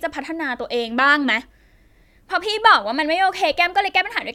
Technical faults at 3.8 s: none

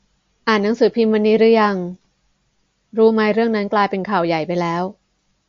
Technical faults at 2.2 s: MP3 compression

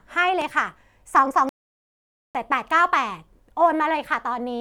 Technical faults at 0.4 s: loud pop

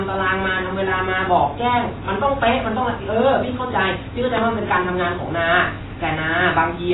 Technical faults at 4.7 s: AAC compression

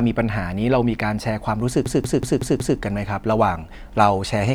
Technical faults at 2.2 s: system hang loop

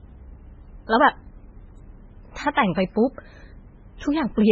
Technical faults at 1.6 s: MP3 compression

